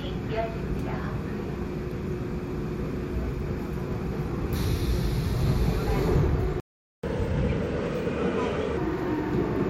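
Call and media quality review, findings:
Playback stall, 6.60 to 7.04 s: sound cuts off mid-flow, full silence for about 0.43 s, then resumes. Likely cause is the player's buffer running dry or its output thread being blocked, starving the device of samples. Waveform shows a flat silent gap with abrupt edges. Spectrogram shows a clean vertical blank band across all frequencies for the gap's width.

Catch-up at higher speed, 7.04 to 8.77 s: immediately after the gap, the sound runs 1.25 times fast, pitch raised roughly four semitones, then snaps back to normal. The player resamples its backlog to recover the lost time. Spectrogram shows harmonics shifted upward and events compressed in time across this span. Waveform shows tighter onset spacing until 8.77 s.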